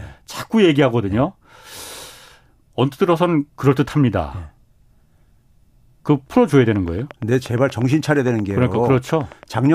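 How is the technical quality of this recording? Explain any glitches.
The recording has one clear glitch. From 6.76 to 9.67 s there is a train of clicks. Interference or a faulty connection is likely injecting a short pulse about 8.6 times per second. The result is around thirty evenly spaced, similar-sounding ticks that poke slightly above the speech level and continue through the pauses.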